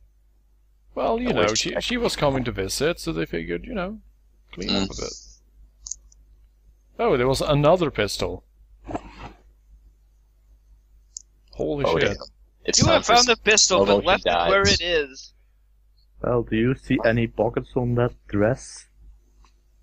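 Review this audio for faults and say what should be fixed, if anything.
Nothing to fix: no faults found anywhere in the audio.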